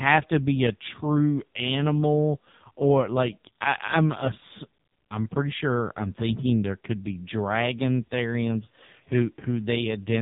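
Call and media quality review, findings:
Buzzy, synthetic speech throughout, nothing above about 3.8 kHz. AMR narrowband mobile codec: 8 kHz vocal-tract model fed by sparse pulses in each 5 ms; heavy damage fits one of AMR-NB's lowest bitrate modes, around 5 kbps.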